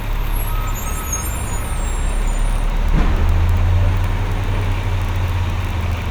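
No technical faults can be heard in this recording.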